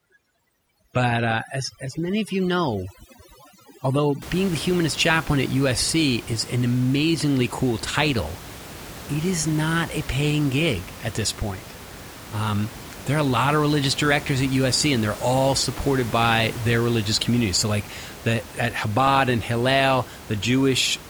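A speech recording opens with overdone noise removal from 0 to 4.22 s. A noise reducer set too strong is clamping individual frequency bands down or out whenever they sit near its noise estimate. Quiet parts of the voice are caught and removed too. The background drops, dotted with twinkling specks. After 4.22 s the room noise returns, about 16 dB below the speech.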